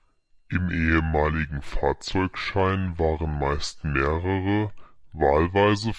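From start to finish, the speech plays back at the wrong sample rate. It runs at about 0.69 times normal speed. Pitch drops about 6.5 semitones. Voices sound low, slow and dragged. The ratio fits 32 kHz audio played at 22 kHz without conversion.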